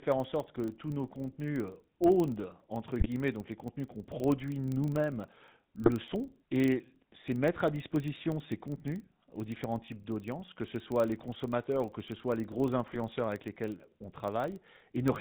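From start to finish the speech has passed through the GSM full-rate codec. The encoder models the vocal tract and drives it with a thinned, regularly spaced pulse train, and the band stops at 4 kHz. That leaves the voice with a plainly audible buzzy, gravelly roughness and a muffled top end, which fits a 13 kbit/s GSM full-rate stream.

Also running throughout is a filter restarted on every block. The processing clears its state at each block boundary, so every block starts from silence with a small transient. Those transients arrive at 25 Hz, one every 40 ms, and form a low buzz that rises and falls with the level of the speech, strongest in the louder syllables.

GSM bit errors then strike three times. Flipped bits reach the decoder and corrupt the filter, pitch or gain values, so a frame comes out with a bent spectrum or a jump in level. The first burst runs from 3.00 to 3.07 s, just before "donc les contenus qu'on", and the second from 5.83 to 5.90 s. 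Both sound like a brief squawk and gargle, consistent with three damaged frames and error rates of about 2.0 and 1.5 percent. The third runs from 12.93 to 12.97 s, between "ce soit les gros" and "avec lesquels on". It is a shorter pop that fits two corrupted frames.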